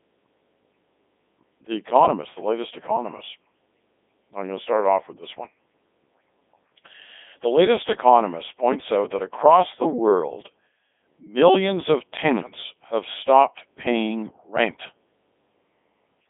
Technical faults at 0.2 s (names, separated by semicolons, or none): Codec 2 vocoder